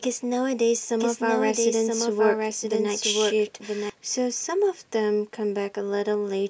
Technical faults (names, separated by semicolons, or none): doubled audio track